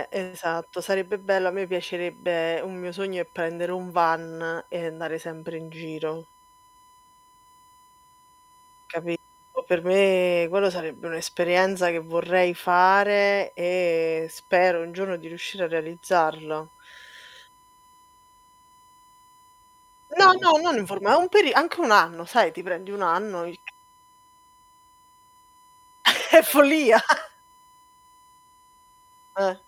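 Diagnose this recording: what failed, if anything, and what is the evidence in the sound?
The failure is in the analogue wiring: USB whine runs under the speech for the whole clip as a steady 1 kHz tone, roughly 35 dB below the signal. The 1 ms USB frame rate modulates current draw, and that ripple leaks into the audio through shared power or ground.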